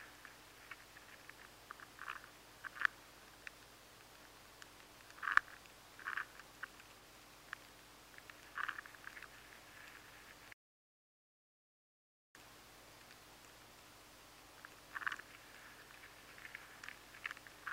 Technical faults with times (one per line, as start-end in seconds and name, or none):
10.53-12.35 audio dropout to silence